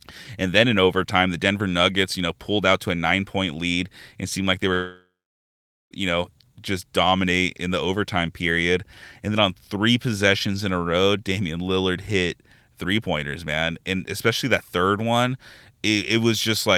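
At 4.73 s the speech breaks off into a smeared, buzzy continuation of its last sound that quickly fades. Roughly 0.83 s of near-silence follows, and speech resumes at 5.93 s having skipped ahead, with about 1.18 s of audio gone. This is likely a long network dropout. Audio stopped arriving, so the receiver stretched the final fragment to cover the gap, gave up and went quiet, then carried on from fresh audio without recovering what was lost.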